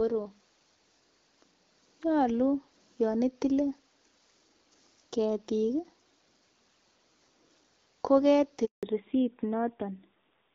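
At 8.65 s the call is handed from one network to another, and no speech frames arrive while the link is switched over. The result is a handover gap: the speech collapses within a few tens of milliseconds and a hole of 180 ms follows, lasting until 8.83 s, when the new link begins carrying audio. Whatever was said inside that window is simply gone rather than muffled or garbled.

From 8.83 s to the end, the call suffers a fallback to narrowband. The new connection no longer carries HD Voice. Before the switch, the speech had the light coding texture of AMR wideband at around 12.65 kbit/s. After it, the sound points to an older narrowband codec, likely AMR-NB at about 7.4 kbit/s. Nothing above 4 kHz survives, so the speech turns duller and rougher.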